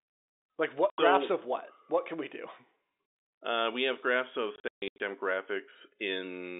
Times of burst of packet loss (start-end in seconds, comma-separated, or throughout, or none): none